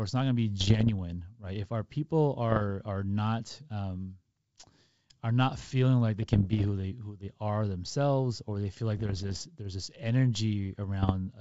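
Bit errors on an ADPCM link break into this G.722-coded speech at 0.61–0.90 s, 2.50–2.63 s, 6.22–6.67 s, 8.97–9.46 s and 11.03–11.12 s. Each flipped bit throws off the decoder's step size and predictor, so it doesn't recover at once. Each burst is heard as pops and rough crackle with brief level jumps. On the waveform these show up as spiky, uneven bursts, and on the spectrogram as broadband vertical streaks.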